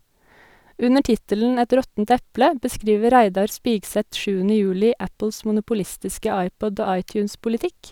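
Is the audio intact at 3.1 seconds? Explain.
Yes, the speech at 3.1 seconds is intact, with no audible fault at that moment.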